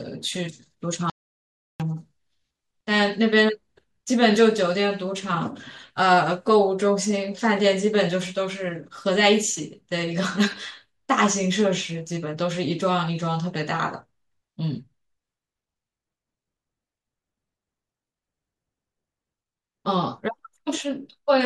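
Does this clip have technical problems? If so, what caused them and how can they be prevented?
Yes. At 1.10 s the speech cuts off into dead silence, with no room tone at all, and returns abruptly at 1.80 s, losing about 0.7 s. This audio dropout to silence likely came from the input briefly disconnecting or muting while recording continued writing silence. Securing connectors and monitoring input levels during capture prevents it.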